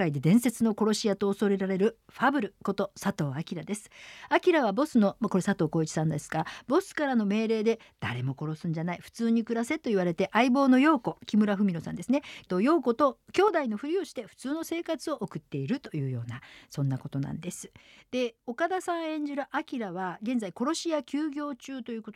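Speech with a sudden gain jump at 13.48 s: from there to the end the whole signal drops by about 6 dB in a single step, with no ramp. The background noise falls by the same amount at the same instant, which separates it from a talker turning away or a gradual fade. The likely cause is a digital gain setting, or an equivalent one-bit shift, applied between two samples without smoothing.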